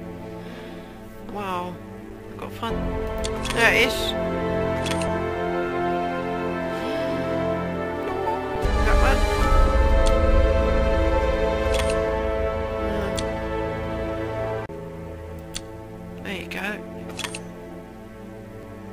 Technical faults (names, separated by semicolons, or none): underrun with held sample